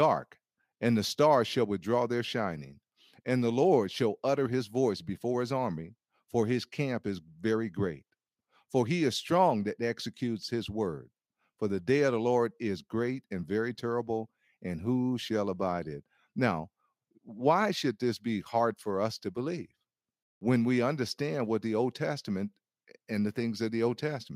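No technical faults can be heard in this speech recording, so there are none to describe in time order.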